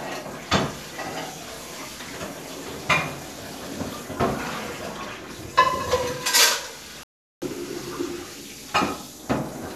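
Everyday sound recording with a digital broadcast dropout from 7.03 to 7.42 s. The receiver muted after losing good frames, so 384 ms vanishes, which fits about sixteen 24 ms frames. The waveform shows a flat gap, and the spectrogram shows a blank column across all frequencies.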